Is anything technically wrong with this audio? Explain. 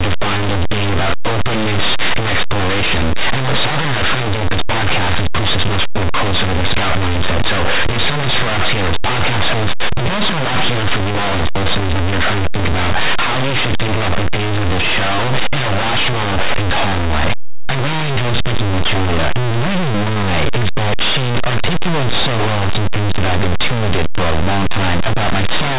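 Yes. Throughout the clip, linear audio is read as companded: plain linear 8-bit samples are expanded as mu-law codes, so values just on one side of zero jump to the largest outputs while those on the other side stay small, producing very loud, harsh distortion over the speech.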